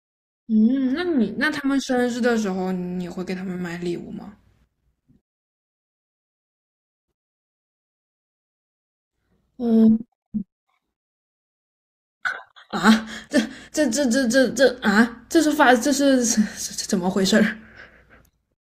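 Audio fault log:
Nothing to log here, since the speech comes across without any fault worth flagging.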